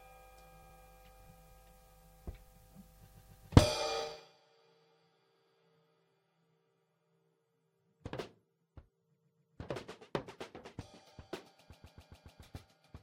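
Runs of compressed frames were sent more than once, so the decoder replays the same short block: repeated frames at 0.62 to 0.76 s (a 70 ms block heard twice more), 3.08 to 3.50 s (139 ms, three more times), 5.34 to 5.58 s (116 ms, twice more), 9.15 to 9.56 s (139 ms, three more times), and 11.72 to 12.41 s (139 ms, five more times). Each is a stutter, and each stretches the audio by the replayed time.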